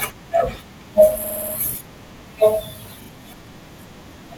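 At 1.24 s the speech stutters for 0.3 s: repeated frames, where a 60 ms chunk of compressed audio gets played five extra times. Then at 3.01 s a 40 ms chunk repeats twice more, adding 80 ms.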